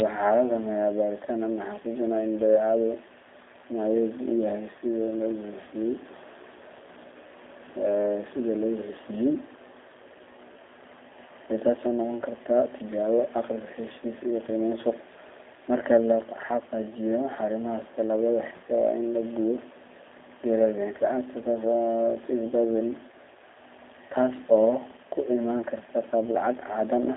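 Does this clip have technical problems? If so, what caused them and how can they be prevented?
Yes. Throughout the speech there is G.729 codec damage. Everything above about 3.7 kHz is gone, and the band sits at roughly 300 Hz to 3.6 kHz. The voice also has a rough, slightly buzzy, synthetic grain, which fits an 8 kbit/s G.729A coder that rebuilds speech from a vocal tract filter, a pitch predictor and a few pulses per 5 ms subframe. That grain sets it apart from a plain telephone band-limit, which would sound muffled but clean. To prevent it, use a wideband or higher-bitrate codec such as G.722 or Opus on the call path.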